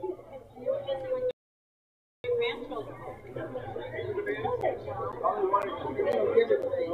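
The audio cuts out completely from 1.31 s to 2.24 s, a gap of about 0.93 s, and then carries on. This is a playback stall, most likely the player running short of buffered data or its thread being held up until it could resume. What sets it apart from a dropout is its single, long silence in mid-flow. It is not a brief click but almost a full second of nothing before the sound returns. Between 4.61 s and 6.63 s a different fault appears: periodic USB or driver dropouts. Every 0.5 s a sliver of the signal, about 10 ms, is replaced by silence, around five times in all, heard as evenly spaced ticks. The strict regularity and very short length point to a background task blocking the bus or driver on a fixed cycle, unlike the one-off, much longer stall earlier.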